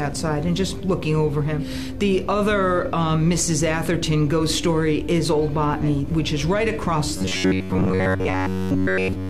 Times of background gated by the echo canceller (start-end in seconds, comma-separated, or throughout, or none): none